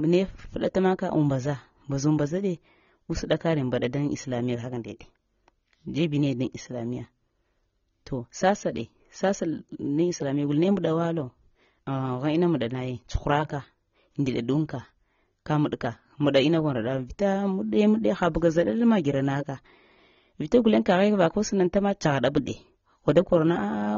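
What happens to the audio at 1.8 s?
At 1.8 s the speech sounds dull and smeared, with a warbling, fizzy edge on sibilants and held sounds. This runs through the whole clip, not just that moment. The likely cause is AAC compression, AAC-LC, at a low rate that fits about 24 kbps. At that rate the encoder drops the upper frequencies and quantises the rest coarsely. Gaps open in the spectrum, and some bands are filled with substitute noise.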